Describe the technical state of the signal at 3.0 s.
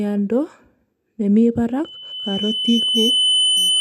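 Loudspeaker feedback squeal, 1.84 s onward: the microphone picks up its own loudspeaker, so a 3 kHz tone swells over about two seconds to roughly the speech's level.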